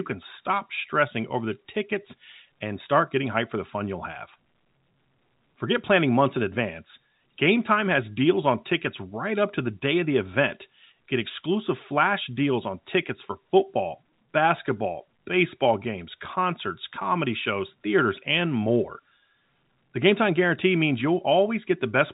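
No faults can be heard anywhere in this speech clip.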